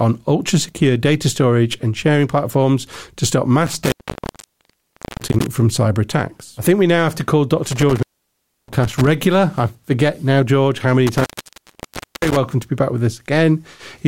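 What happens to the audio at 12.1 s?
An intermittent contact cuts the sound from 11.07 to 12.37 s. A loose connection opens for about 0.98 s, leaving faint hiss between crackling edges.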